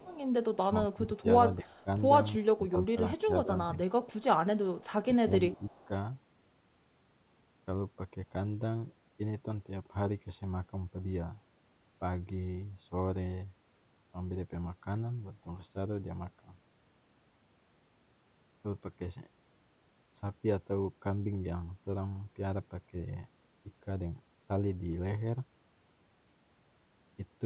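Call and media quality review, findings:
Echo leak: faint delayed copy of the talker at 0.00–0.18 s, 1.18–1.81 s, 4.79–4.89 s and 5.61–5.85 s, lagging 326 ms and roughly 30–35 dB down. Likely far-end loudspeaker echo not fully cancelled by AEC. Spectrogram: ghost harmonic pattern shifted about 0.33 s right.

Speech suppressed in double talk: talker level dips in pieces between 0.66 and 3.78 s (about 1 s total, deepest near 20 dB) and 4.9–5.9 s (under half a second, near 15 dB). Likely AEC/suppressor ducking both sides during overlap. Waveform: bitten-out envelope notches.

Band-limited throughout, nothing above 4 kHz, consistent with a narrowband G.711 path.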